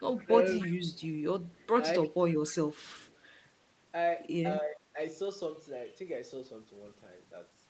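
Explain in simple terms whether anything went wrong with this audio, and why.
Yes, two kinds of problem. Echo leak: a delayed copy of the talker, trailing about 0.29 seconds behind, at 0.0, 0.55, 0.94, 1.48, 2.32 and 2.78 seconds, likely from a loudspeaker echo the canceller missed. Speech suppressed in double talk: the talker briefly dips rather than doubling, at 0.24 and 4.63 seconds, likely because both sides overlapped.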